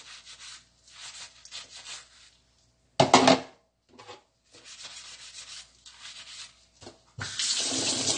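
From start to finish the sound is dull and smeared, with a fizzy, warbling edge, and nothing reaches above about 9.7 kHz. This is likely AAC compression damage: a low-bitrate AAC-LC encode, consistent with roughly 32 kbps, cutting high frequencies and coarsely quantising the rest.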